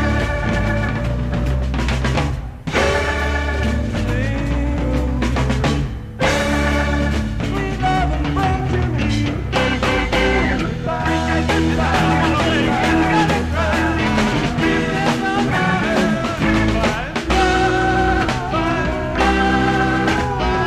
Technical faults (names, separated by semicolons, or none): none